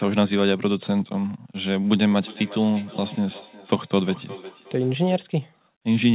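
From 2.11 s to 5.27 s the speech returns as a thin, ringing repeat roughly every 0.4 s, peaking at about 18 dB below the direct speech. This is feedback echo between two devices. Two devices in the same room are on one call, and one plays back what the other's microphone sent. That microphone picks up the playback and sends it again. Neither echo canceller removes sound played by the other device, so the loop survives. The clip is band-limited to 4 kHz, which points to a narrowband telephone codec.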